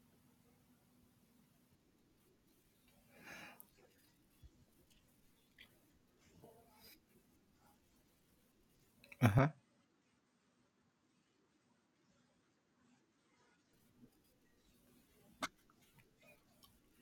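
At 9.39 s the speech abruptly loses its top end and drops by roughly 5 dB, with no gap at the join, then recovers at 13.73 s. The likely cause is an input switched to a poorer device, whose narrower band cuts everything above 8.8 kHz and adds its own faint noise floor, roughly 50 dB down. On a spectrogram the upper band goes empty across that stretch, and the waveform shrinks visibly.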